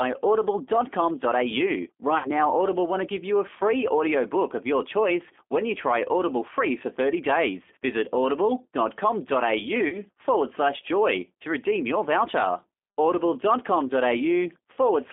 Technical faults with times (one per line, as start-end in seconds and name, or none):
0.00-15.13 G.729 codec
2.18-2.29 VoIP packet loss concealed by the speech codec
9.88-9.99 VoIP packet loss concealed by the speech codec
14.73-14.79 VoIP packet loss concealed by the speech codec